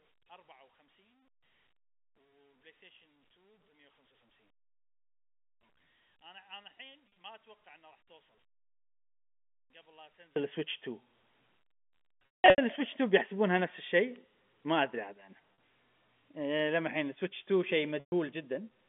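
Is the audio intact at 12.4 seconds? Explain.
No. From 12.26 to 12.58 s the sound turns into a held, buzzy tone that fades toward silence during the longest gap, then returns through a brief cross-fade. This is packet loss with pitch repetition. About 280 ms of audio went missing across those 320 ms, with the longest unbroken run lasting 180 ms, which fits 20 ms packets. To cover each gap, the receiver looped the last pitch period and faded it out over roughly 50 ms.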